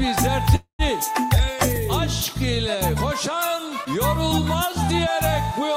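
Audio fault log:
0.55–0.82 s, call audio freeze: packets likely arrived late, emptying the jitter buffer; the last sound is stretched into a fading buzz or hiss, then about 0.11 s of silence, nothing lost.
1.43–2.09 s, CD scratch ticks: five regular ticks, each under about 2 ms, where a disc blemish exceeded error correction once per revolution and samples were interpolated or muted.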